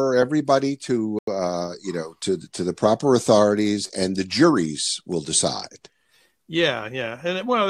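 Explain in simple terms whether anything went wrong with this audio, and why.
At 1.19 to 1.27 s the speech drops to silence for about 90 ms, then resumes at "uh you know to". That's likely a Bluetooth stall, where the headphones briefly ran out of audio.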